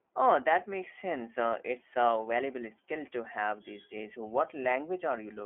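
Throughout the speech, the iLBC codec shapes the sound. The band is narrow, roughly 300 Hz to 3.4 kHz, and nothing remains above 3.6 kHz. Each 20 ms frame is coded on its own. The codec damage is plainly audible as a rough, synthetic edge.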